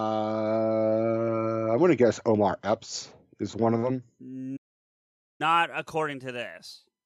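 Just after "is one of them", at 4.56 s, the speech cuts to silence for about 0.83 s: a playback stall. It resumes at "according to this". Likely the player starved of data.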